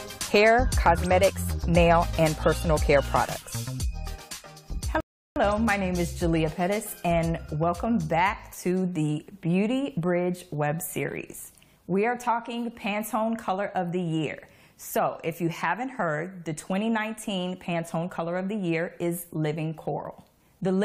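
A rebuffering stall at 5.00 s: playback ran dry of downloaded audio, fell silent for about 0.36 s, then resumed exactly where it stopped, losing nothing.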